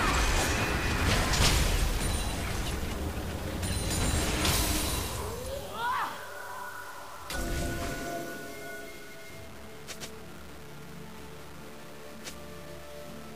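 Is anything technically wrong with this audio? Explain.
Yes. Low bit depth without dither runs throughout: the audio was likely truncated to about 6 bits, so grainy distortion sits roughly 20 dB below the signal, tracking it.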